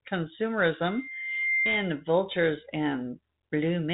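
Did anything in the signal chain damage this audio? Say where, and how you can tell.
Yes. A loudspeaker feedback squeal enters at the acoustic microphone stage, from 0.86 to 2.04 s. A tone at 2.1 kHz swells over roughly 0.7 s to about 5 dB above the speech. The microphone is re-amplifying its own loudspeaker, so loop gain exceeds one at that frequency. A spectrogram shows a single bright horizontal line, below the 3.8 kHz telephone-band ceiling, and the waveform shows a rising sinusoidal envelope.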